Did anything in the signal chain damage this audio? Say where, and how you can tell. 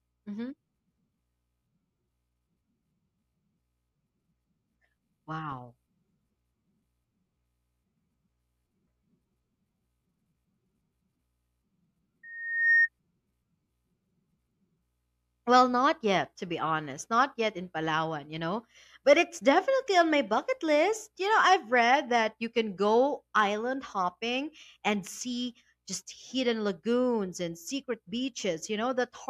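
Yes. Loudspeaker feedback squeal at playback, 12.23 to 12.89 s. A 1.8 kHz tone swells over half a second. The microphone hears its own loudspeaker, and loop gain exceeds one.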